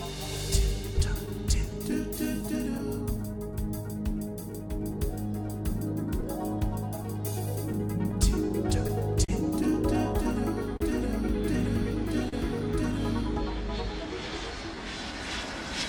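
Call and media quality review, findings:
Clock drift between sender and receiver, whole clip. Sender clock about 3% slow against receiver; jitter buffer keeps draining, so receiver must pad audio to hold sync. Root cause for the hiccups below.

Repeated timing corrections, 0.70–15.54 s. Small repeats spliced in unevenly, all lengthening, net playback around 99% speed, roughly 200 ms added overall. Heard as faint hiccups and a slightly dragging, unsteady tempo. Component: receiver jitter buffer / playout adaptation.

Scattered short gaps, 1.26–3.20 s and 6.21–9.30 s. First stretch: about five tiny holes, each under about 10 ms. Second: about ten, longest near 40 ms, roughly 100 ms patched. Lost or late packets concealed by extending the last sound; brief ticks and smears, nothing dropped.

Short stall from a late packet, 10.77 s and 12.29 s. Buffer ran empty; last sound held 35 ms, then 39 ms, until the packet arrived, resuming in place. 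Audible as a momentary hold with slight buzz or dip. Component: jitter buffer underrun.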